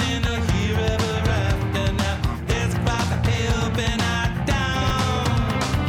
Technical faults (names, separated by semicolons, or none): chunks out of order